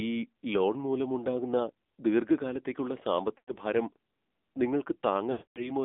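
Throughout, the speech passes through the AMR narrowband mobile codec. Its vocal-tract model gets only a few bits, consistent with about 7.4 kbps, so the voice sounds buzzy and synthetic, confined to roughly 250 Hz to 3.6 kHz.

From 3.38 to 3.56 s, just after "ലോൺ മൂലമുണ്ടാകുന്ന ദീർഘകാലത്തേക്കുള്ള", lost AMR speech frames make the decoder repeat its last settings at falling gain, smearing and fading the sound. The same happens for longer at 5.32 to 5.71 s, where it decays to silence.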